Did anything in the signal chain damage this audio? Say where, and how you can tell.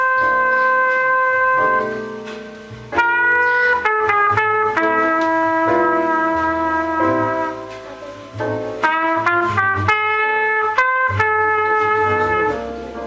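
No, nothing in the chain audibly damaged this audio.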